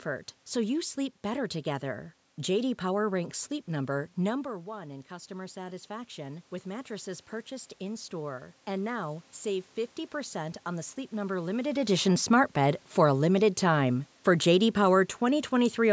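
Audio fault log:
4.45–9.3 s, automatic gain rising: after the voice fell about 12 dB near 4 s, the gain control slowly added about 7 dB, so voice and room noise swell together.
12.32–15.81 s, automatic gain falling: after "limited edition", the talker having moved near 11.5 s, the control eased gain down about 4 dB, so speech and background sink together.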